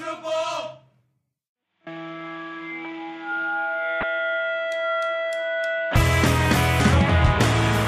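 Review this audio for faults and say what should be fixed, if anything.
Damaged data in a compressed stream at 4.00 to 4.03 s and 6.77 to 6.80 s: corrupted bytes make the decoder misread frames and lose sync until the next header, giving brief glitches. Transfer the file with checksums and decode from a verified copy.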